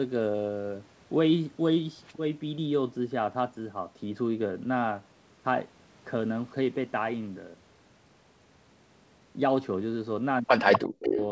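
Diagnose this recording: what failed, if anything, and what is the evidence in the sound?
An echo canceller in the call processing stage likely let loudspeaker pickup through. From 10.73 to 10.87 s and again from 11.03 to 11.25 s, a copy of the speech trails the original by 252 ms, only a few dB quieter. This is an echo leak.

Speech suppressed in double talk appears over the same stretch. From 10.78 to 11.18 s the near talker's level sinks by roughly 40 dB. The canceller, likely confused by overlapping signals, clamped down on everything, including genuine speech.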